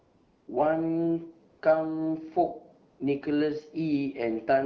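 A speech recording carried over AMR-WB HD Voice with only light coding damage, it has AMR comfort noise at 0.00 to 0.47 s, 1.51 to 1.61 s and 2.89 to 2.99 s: during each pause the real background gives way to smooth synthetic hiss rather than the dead silence a noise gate would leave.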